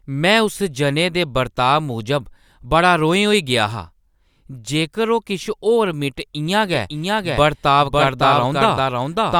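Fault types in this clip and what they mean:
Doubled audio track: From 6.72 s to the end, the speech is heard twice: a second full-band copy trails about half a second behind, a few decibels quieter than the original. The copy starts abruptly and carries no decay or room colour, so it reads as a clean duplicate rather than an echo. The likely cause is the same signal reaching the mix a second time through a slower path, or an edit leaving two offset copies.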